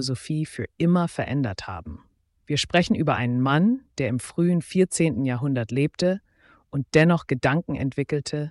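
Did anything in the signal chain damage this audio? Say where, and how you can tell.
No, nothing in the signal chain shows audible damage here: the signal stays continuous and undistorted throughout, with no stage leaving a mark that can be heard.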